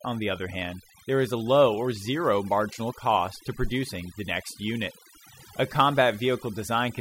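From start to finish the speech shows overdone noise removal. A noise reducer set far too aggressively has switched individual frequency bands down or off wherever they sat close to its noise estimate, taking the softer parts of the voice along with them. Between phrases the background collapses into near silence scattered with twinkling specks. A spectrogram would show isolated bright dots in otherwise empty gaps and ragged, patchy harmonics.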